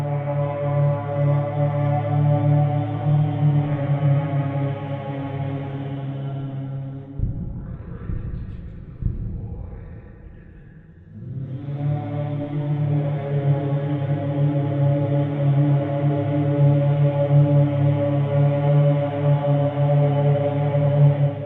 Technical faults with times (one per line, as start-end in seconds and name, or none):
0.00-21.46 MP2 compression